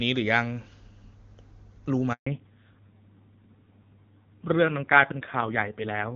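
A speech clip on a mobile call. A handover gap silences the sound from 2.13 to 2.27 s. Speech frames stopped for 140 ms while the call switched networks. A fallback to narrowband follows at 2.27 s and lasts to the end. Nothing above 4 kHz remains, and the speech turns dull and rough. The earlier part is clear wideband audio, which points to HD Voice at a high AMR-WB rate. The rougher sound afterwards fits a low-rate narrowband codec, such as AMR-NB near 5.9 kbit/s.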